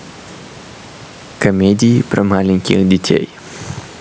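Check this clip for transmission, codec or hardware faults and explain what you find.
There's one real fault here, gain pumping, and it runs through the whole speech clip. The gain ducks by around 10 dB whenever the speech gets loud, so everything sounds squashed and flat in level. The likely cause is microphone gain set far too high, with a fast limiter clamping down on each loud moment. The room noise sits about 34 dB below the speech, and the top end stopping at 8 kHz is just the call's microphone processing.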